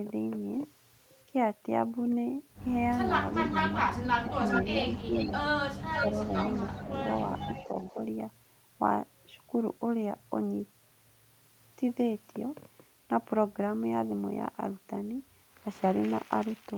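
From 3.33 to 3.57 s a faint delayed copy of the speech trails the original by about 0.4 s, roughly 10 dB below it. This is an echo leak: a loudspeaker on the far side was likely picked up by its microphone, and the echo canceller let part of that sound return.

At 3.5 to 3.56 s the main speech dips by a few dB. It drops again by about 15 dB at 4.23 to 4.27 s. This is speech suppressed in double talk: with both sides sounding at once, the canceller likely could not separate its talker from the echo and turned both down.

From 4.25 to 5.3 s the echo returns louder, only about 5 dB under the speech and again about 0.4 s late. Within that stretch, 4.88 to 5.26 s, the main speech sags by about 10 dB.

Between 5.86 and 7.99 s the speech breaks up in pieces totalling about half a second, dropping by up to about 15 dB. A third echo leak, about 10 dB down and 0.4 s late, runs from 5.95 to 7.94 s.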